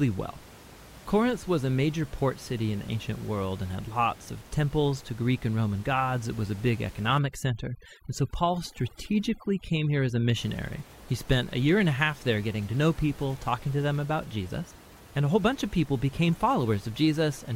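From 7.18 to 10.38 s, just after "was a big", overdone noise removal sets in. The room noise, about 22 dB below the speech, is gated too hard, so individual frequency bands are switched off along with quiet parts of the speech. The background drops and breaks up into twinkling specks. A spectrogram shows patchy, speckled gaps between the harmonics.

At 16.28 s, after "whole bunch of people", compressed frames are skipped: roughly 20 ms of audio is left out and the audio jumps forward. The waveform shows a discontinuity, and the spectrogram shows a thin vertical mark.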